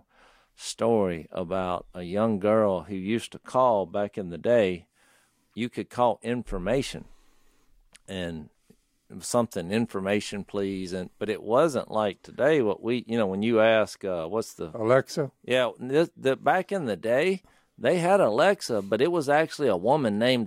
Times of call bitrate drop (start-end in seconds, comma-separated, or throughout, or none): none